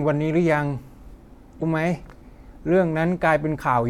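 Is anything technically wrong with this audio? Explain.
Yes. Damaged data in a compressed stream hits the speech from 1.58 to 1.63 s. Some of the encoded bytes at that point are corrupt, so the decoder cannot read those frames properly, drops out of sync and hunts forward for the next valid frame header before picking the signal up again. What reaches the ear is a brief chirp, squawk, click or short hole lasting about 40 ms.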